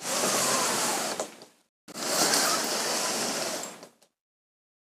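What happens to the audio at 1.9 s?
A Bluetooth dropout hits at 1.92 to 1.94 s. The output cuts to silence for roughly 15 ms, then resumes further along as if it had kept playing. This is likely a single wireless packet arriving too late and being discarded.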